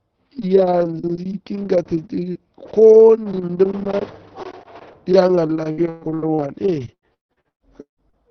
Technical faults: repeated packet loss (robotic sound)

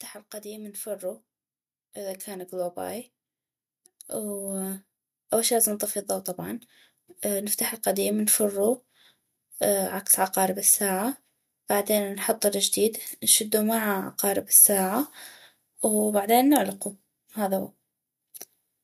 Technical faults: automatic gain rising

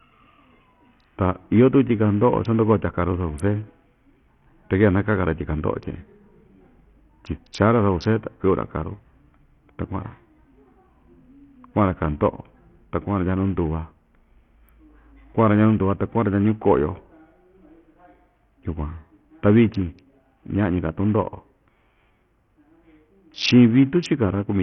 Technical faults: Bluetooth SBC compression

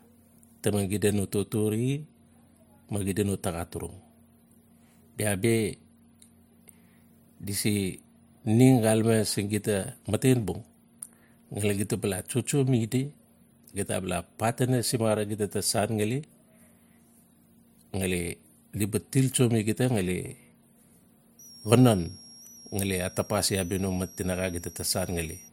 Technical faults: switching supply whistle

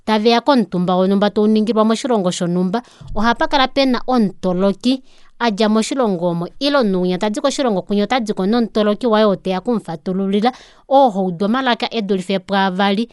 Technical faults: Dolby Digital compression

